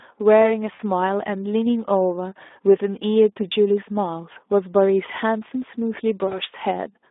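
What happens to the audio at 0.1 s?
At 0.1 s the speech already carries Speex codec damage, lasting the whole clip. The coarse excitation sounds hoarse and noisy, fitting roughly 11 kbps, within a 250 Hz to 3.6 kHz band.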